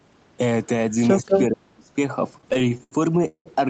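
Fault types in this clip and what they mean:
Speech suppressed in double talk: Between 1.15 and 1.3 s the voice dips by about 20 dB, and from 1.49 to 1.91 s it is pushed down harder, by about 35 dB. The likely cause is both sides talking at once: the echo canceller could not tell the near talker from the loudspeaker echo, so it turned the whole signal down and took the wanted speech with it.
Echo leak: From 1.28 to 1.42 s a second copy of the voice sits under the speech, trailing it by about 194 ms and roughly as loud as the speech itself. This is most likely a far-end loudspeaker whose echo canceller failed to remove everything its microphone picked up. The leftover was sent back down the line and is heard here as a short delayed repeat.
Repeated stalls (stutter): Between 2.33 and 3.48 s playback hangs sixteen times, with the longest hold about 0.18 s, giving the passage a dragging, stuttering feel. 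During each hold the receiver stretches the last sound until fresh audio arrives. That bridging adds up to about 0.4 s, roughly 35% of the span, and no audio is actually lost. The pattern points to packets arriving late or too slowly, so the jitter buffer kept running dry.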